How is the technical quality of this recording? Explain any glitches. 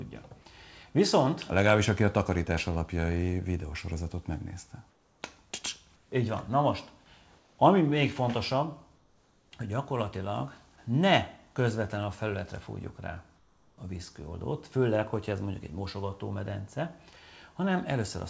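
Five short pauses in the background sound wrong. Through a call path whose codec leaves nothing above 8 kHz, the real background is replaced by a flat, featureless hiss at 4.90–5.22 s, 5.96–6.12 s, 7.38–7.58 s, 8.96–9.52 s and 13.36–13.78 s, each about 2 to 4 dB quieter than what surrounds it. This is comfort noise in place of the background, likely caused by discontinuous transmission: the sender goes quiet when it detects no activity, and the receiver fills the gap with synthetic noise.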